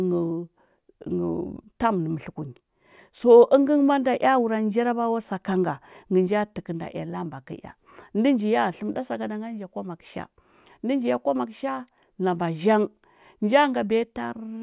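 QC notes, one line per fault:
Nothing stood out on listening.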